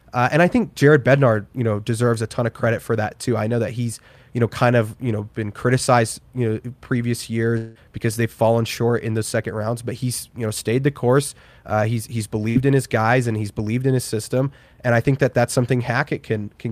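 Around 7.57 to 7.78 s, right after "criticized you know previous", there's a gap of roughly 180 ms where the last sound is stretched into a hold that fades but never drops to silence. Then the audio picks up at "because they've fallen short" with that stretch missing. It's likely a long network dropout, where the receiver had nothing new to play and just kept extending what it last had.

At 12.49 to 12.58 s, between "he's he's" and "in his guys and", there's a shorter hiccup of about 60 ms. That's a burst of packet loss: a run of packets never arrived in time, so the receiver briefly held the last sound and turned it down, then resumed a bit further along with the missing sliver skipped.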